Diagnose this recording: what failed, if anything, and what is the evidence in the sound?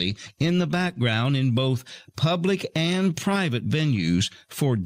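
What you're hearing is gain pumping, running the whole length of this speech clip. The gain gets shoved down the moment the talker gets loud, a swing of something like 10 dB. Level differences between loud and quiet passages are flattened, so it all sounds squashed. The likely culprit is the input gain set far too hot at the mic stage, with a fast limiter or compressor in the processing chain clamping down on each peak.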